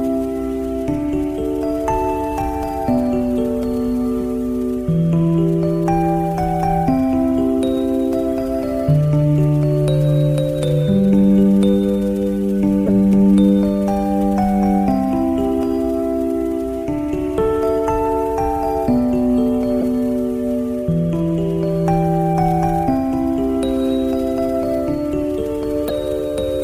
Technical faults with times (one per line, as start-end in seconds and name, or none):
12.86-12.89 corrupt frame decoded
19.81-19.83 corrupt frame decoded
25.83-25.91 corrupt frame decoded